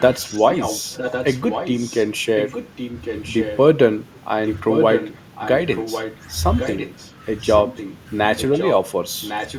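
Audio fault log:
0.00–3.57 s, 4.46–6.17 s, 6.57–7.96 s, 8.37–8.71 s and 9.21–9.58 s: echo leak. A second copy of the speech trails the original by about 1.1 s, sitting roughly 10 dB below it and rising to about 5 dB below between 4.46 and 6.17 s. The likely cause is a far end playing the call over a loudspeaker whose echo canceller failed to strip the microphone's pickup and so returned it down the line.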